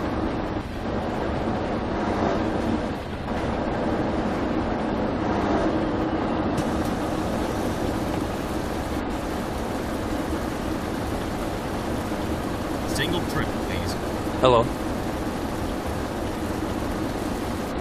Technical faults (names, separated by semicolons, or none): damaged data in a compressed stream